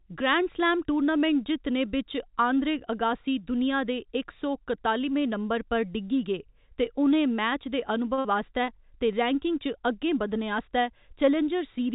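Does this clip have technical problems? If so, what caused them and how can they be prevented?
Yes. At 8.14 s the speech briefly hangs: one sound is held unnaturally for about 34 ms, with a faint buzzy sameness, and then carries on with nothing skipped. This is a short stall from a late packet. A packet missed its playout time, the jitter buffer ran dry, and the receiver stretched the last sound until it arrived. Playout then resumed from the same point, about 34 ms behind schedule. A jitter buffer that adapts its depth sooner to rising delay variation would absorb the late packet without stalling.

Immediately afterwards, from 8.19 to 8.26 s, the held sound is stretched briefly and fades, and the speech picks up slightly further along. About 60 ms of speech is missing. This is a burst of packet loss. Consecutive packets were lost or arrived too late to play, so the receiver extended and attenuated the last sound for about 49 ms to cover the gap, then skipped ahead. 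Because this follows the stall so closely, the two together suggest a single spell of network congestion. The call path itself is narrowband, with nothing above 4 kHz, which fits G.711 mu-law at 64 kbps. That codec has no built-in redundancy. Forward error correction or redundant packet encoding, together with a less congested network route, would let the receiver rebuild most of the lost audio.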